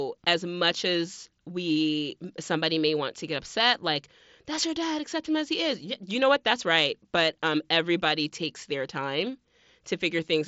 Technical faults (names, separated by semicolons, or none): none